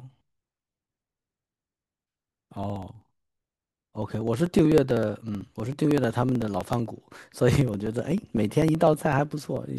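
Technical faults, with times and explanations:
0.11–9.69 s, periodic USB or driver dropouts: every 0.063 s, about 16 times a second, something briefly stalls the audio path and roughly a millisecond of speech is skipped outright, so the waveform jumps and leaves a tiny discontinuity. Over the span that is around 150 small clicks in a steady, even ticking that rides along only where speech is present. A spectrogram shows thin, evenly spaced vertical broadband lines through the voiced regions, and the waveform shows matching abrupt steps.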